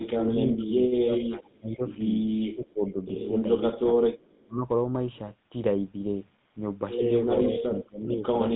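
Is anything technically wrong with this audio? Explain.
Yes, there are three kinds of fault in this speech clip.

GSM full-rate codec, throughout: the speech has been squeezed through the original GSM vocal-tract model. The model keeps a sparse, regularly spaced pulse excitation and discards much of the fine detail, which fits a 13 kbps full-rate stream. The line band runs from about 150 Hz to 3.7 kHz. The voice sounds clearly buzzy and gravelly, with a narrow, boxed-in top end. The call's microphone high-pass accounts only for the missing lowest bass.

Speech suppressed in double talk, from 0.00 to 1.82 s and again from 4.46 to 4.62 s: the level falls by about 25 dB in places, for roughly 1.65 seconds in total. The likely cause is an echo canceller that treated both ends as talking at once. It could not tell this talker apart from loudspeaker echo, so it turned the signal down. The voice dips, thins and drops out in pieces rather than fading smoothly.

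GSM bit errors, from 6.98 to 7.01 s: corrupted bits reached the decoder on a weak radio link. The damage fits a bit error rate of a few percent striking a single speech frame. Wrong filter, pitch or gain values twist the spectrum and jolt the level for that instant. The result is a brief squawk or gargling pop that breaks through the codec's steady buzz.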